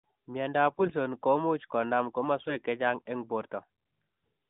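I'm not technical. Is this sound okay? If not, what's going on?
No. Two short bursts of AMR bit errors make the speech sound hoarse and gargly: 0.70 to 0.92 s, just before "komuuch konam", and 2.36 to 2.59 s, right after "komuuch konam". A weak phone link flipped some of the less important bits in each chunk of the mobile codec's data, so the voice keeps its pitch and loudness but turns scratchy.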